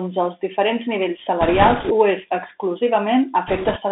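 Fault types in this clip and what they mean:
Bluetooth CVSD headset codec: throughout, the speech is confined to 250 Hz to 3.6 kHz, and the one-bit up-or-down coding with an adapting step, which fits a 64 kbps CVSD link, leaves a granular hiss, scratchy s sounds and distortion where loud high sounds outrun the step.
Bit errors on a Bluetooth voice link: from 1.41 to 1.92 s and 3.48 to 3.78 s, flipped bits, around a few percent, add a rushing, crackly noise. Each bit carries little weight and errors fade quickly, so there are no loud clicks.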